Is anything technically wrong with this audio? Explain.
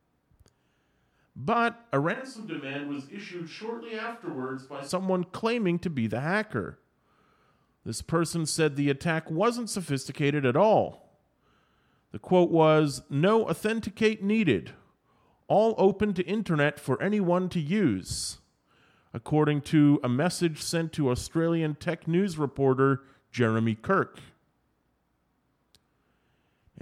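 Yes, there's one problem. From 2.15 to 4.88 s the speech abruptly turns roomy and hollow, thins out in the bass, drops by around 10 dB and gets noisier, then snaps back. That's likely a switch to a distant microphone, with the close mic's signal missing there.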